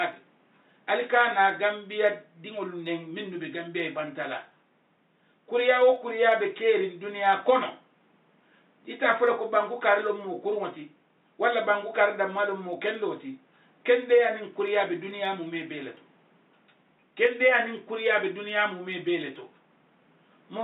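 From 0.13 s to 20.58 s, clock slip clicks tick about every 0.07 s, roughly 300 in all. Mismatched device clocks, around 300 ppm apart, likely drop or repeat single samples.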